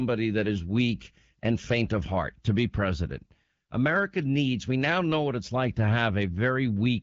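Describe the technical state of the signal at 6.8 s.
At 6.8 s the speech is intact, carried through the AMR wideband (HD Voice) codec at 12.65 kbit/s with only light coding, and with no content above about 7.3 kHz as that band limit sets.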